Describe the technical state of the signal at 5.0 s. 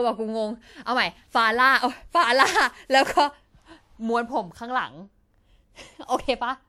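At 5.0 s the speech carries generation loss, present across the whole clip rather than at that moment alone. The sound is swirly and hollow, consonant attacks are smeared, and there is nothing above 19.6 kHz. The likely cause is repeated lossy re-encoding, around seven passes, in a character that fits WMA at 128 kbit/s. Each pass quantises again on a shifted frame grid, so noise accumulates beyond what that bitrate alone would produce.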